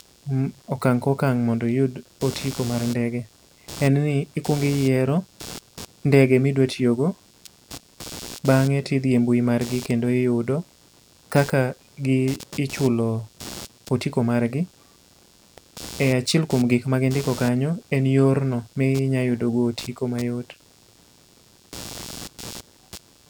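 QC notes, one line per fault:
Throughout: computer activity noise, a buzzy pulsing at around 100 Hz, roughly 20 dB below the speech, caused by processor and graphics load disturbing the shared ground. Unlike steady mains hum, it rises and falls with machine activity rather than staying constant or following the speech.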